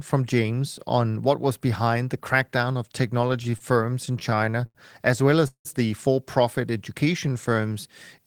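From 3.27 to 4.77 s the speech breaks into repeated stalls (stutter): eighteen short gaps where packets arrived late and the jitter buffer kept running dry. Each gap was bridged by extending the last sound, about 274 ms in total and roughly 18% of that stretch, the longest lasting 88 ms. The speech drags and hiccups. On a spectrogram, harmonic bands smear flat across many thin slices, and the waveform shows repeated, decaying copies of the preceding cycles.

At 5.47 s comes a call audio freeze lasting until 5.67 s. The sound hangs as a buzz that fades, then drops to silence for about 100 ms before picking up where it stopped. About 174 ms is inserted and nothing is lost, which fits a likely cause of packets held up in transit and the playout delay jumping by the same 174 ms. A spectrogram shows a frozen, fading spectral slice followed by a blank column, and the waveform tapers to a flat line.

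From 6.71 to 7.74 s a jitter buffer slow-down adds about 103 ms. Single pitch periods and bits of pauses are repeated to rebuild the buffer reserve, so the speech plays at about 91% of its normal speed without any change in pitch. Sounds are drawn out. On a spectrogram, harmonics keep their spacing but stretch horizontally. The waveform shows runs of near-identical repeated cycles.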